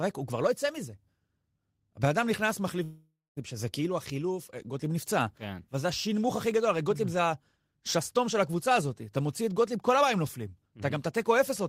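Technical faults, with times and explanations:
2.83 to 3.39 s, long network dropout: the speech gives way to a smeared buzz that continues the last sound and fades, then leaves about 0.22 s of near-silence before the speech resumes with roughly 0.54 s of it lost. The likely cause is a stall in packet delivery, with the receiver filling the gap by stretching the final frames. On a spectrogram, frozen horizontal bands thin out into a blank strip, and the waveform tapers into a flat line before it jumps back.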